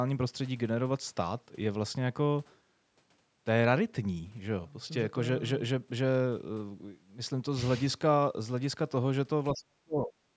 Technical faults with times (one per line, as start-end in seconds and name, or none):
9.53-10.36 speech suppressed in double talk